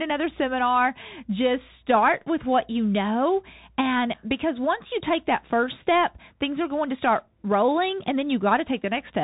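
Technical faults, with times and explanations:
Throughout, Bluetooth CVSD headset codec: the speech went through a one-bit delta coder whose adaptive step, fitting a 64 kbps CVSD stream, can't keep pace with fast changes, so loud high passages distort, s sounds scratch, grainy hiss underlies everything, and nothing above 3.8 kHz survives.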